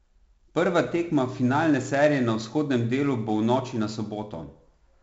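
From start to finish the speech carries a gritty, granular hiss that rides on every louder syllable and drops back in the pauses, with roughness on sharp onsets and nothing heard above about 7.7 kHz. This is 4-bit ADPCM compression, heavily damaging here: each sample is coded as a coarse step from a prediction, so the error swells with the signal and smears attacks the step size cannot follow. The missing top fits a 16 kHz sample rate at 64 kbps.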